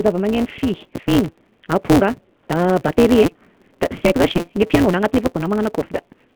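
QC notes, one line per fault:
Throughout: AMR narrowband mobile codec. The band is confined to roughly 150 Hz to 3.4 kHz, and the speech has a plainly buzzy, synthetic texture from the pulse-driven vocal tract model, which fits a mid-range rate near 10 kbps. Unlike plain band-limiting, the damage is in the voice's texture, not just missing treble.
Throughout: block size mismatch (truncated). A steady 172 Hz buzz runs under everything, and the speech races along 1.88 times too fast while keeping about its normal pitch. The tail of each block is discarded, which fits a 256-sample read. A resampling error would shift the pitch with the speed.
4.37–4.42 s and 5.33–5.35 s: lost AMR speech frames. There are dropouts of 40 ms and then 20 ms, where the decoder repeats the last pitch and vocal tract settings at falling gain, giving a brief warbling dip. This fits two lost frames and then one. A clean gap would be silence, not a smeared continuation.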